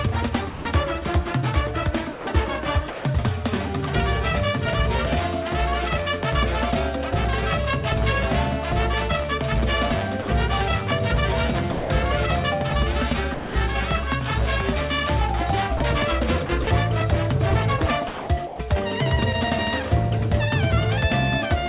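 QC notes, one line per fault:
0.5–0.65 s, 10.22–10.28 s, 11.72–11.9 s and 13.34–13.55 s, sound dropped by the voice detector: the sending side's detector likely judged the sound as background and stopped transmitting, so the receiver filled each gap with comfort noise. The sound vanishes for 150, 60, 180 and 210 ms and gives way to a flat synthetic hiss, whose band stops near 4 kHz like the rest of the call path, before snapping back when transmission resumes.
2.12–3.05 s, 15.77–16.67 s and 18.08–18.59 s, sound chopped by the voice detector: across each stretch the detector likely toggled between sending and muting more than once, and comfort noise covered the muted pieces, about 300, 90 and 330 ms in total. The sound comes through in broken fragments, with two or more holes where comfort noise takes over.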